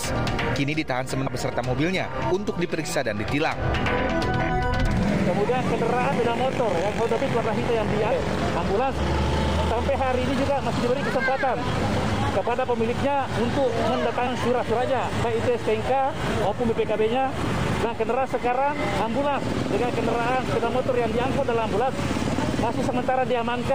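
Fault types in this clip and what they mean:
Compressed frames skipped: the audio jumps forward at 1.26, 4.39, 6.11, 8.11 and 14.26 s, each time losing roughly 150 to 500 ms, because whole blocks of compressed audio, consistent with 23.2 ms frames, were missing or rejected by the decoder as damaged.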